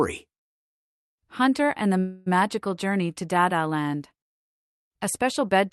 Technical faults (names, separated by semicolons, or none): call audio freeze